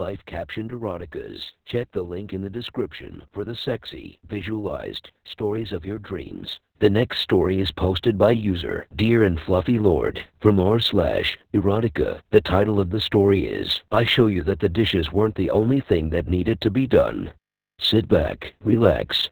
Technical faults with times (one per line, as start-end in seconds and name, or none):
0.00-19.31 Opus voice compression
0.00-19.31 sample clock jitter